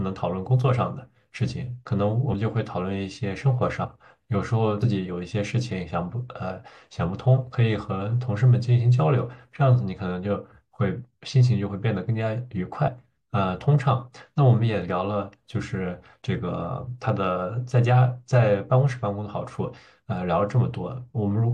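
At 3.83 to 3.85 s, 4.81 to 4.85 s and 12.87 to 12.91 s the speech shows compressed frames skipped. Whole coded frames never reached the output, either missing from the stream or rejected by the decoder as corrupt, so playback jumps forward by roughly 50 ms, 70 ms and 50 ms respectively.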